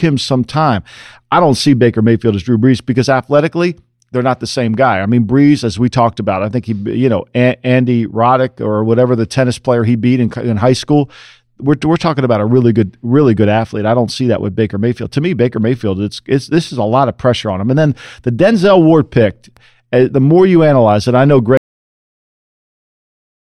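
At 21.57 s, just after "analyze it I know", the speech has a cut-off end. The sound stops mid-utterance. There is no natural decay and no fade. The signal drops straight to digital silence, which lasts the final 1.9 s. The closing stretch of audio was never written out or played. Recording or playback ended before the last buffers were flushed, so the tail of the speech is simply missing.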